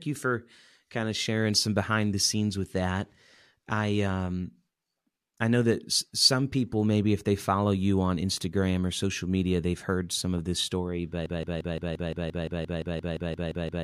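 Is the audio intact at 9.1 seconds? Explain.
Yes, at 9.1 seconds the speech plays through intact, with no dropout, glitch or other fault at that point.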